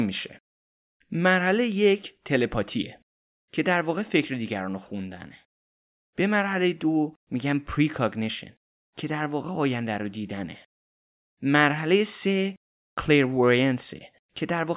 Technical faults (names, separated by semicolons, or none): none